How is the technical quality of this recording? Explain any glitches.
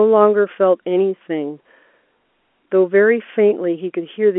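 No glitches or technical faults can be heard here.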